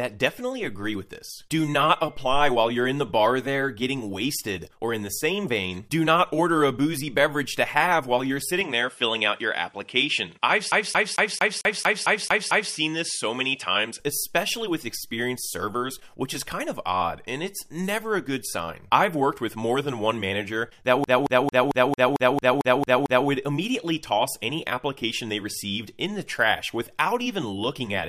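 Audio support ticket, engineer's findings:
Dull, narrower sound from 8.61 s to 14.0 s: nothing above 11.4 kHz, a new noise floor roughly 45 dB under the signal, no gap at the changeover and no obvious level jump. Likely cause: input switched to a poorer device mid-recording, e.g. a second mic or headset call profile. Its narrower passband and own noise take over until 14.0 s, when the original input returns.

Fast, even stutter at 10.71–12.73 s (nine repeats) and 21.04–23.28 s (ten repeats). Same 224 ms slice replays each time, brief mute at every jump. CD stuck on one turn: a scratch kicks the laser back one track at the same spot per revolution, so the loop length matches one rotation.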